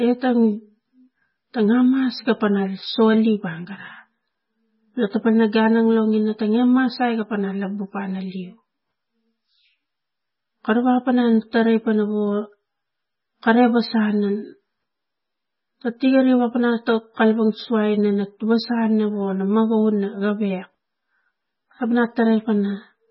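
Throughout, the speech has nothing above 5.6 kHz and sounds heavily watery and swirly. The likely cause is MP3 compression at a very low bitrate, near 16 kbps.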